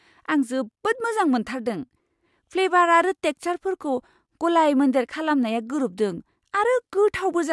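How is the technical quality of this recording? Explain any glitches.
The technical quality of the recording is sound, with no glitches to explain.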